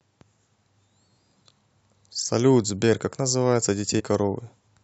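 At 3.98 to 4.01 s, damaged data in the compressed stream breaks the speech with a brief glitch lasting about 20 ms. Corrupted bytes there cause the decoder to misread frames, lose synchronisation and resume decoding only at the next valid frame header.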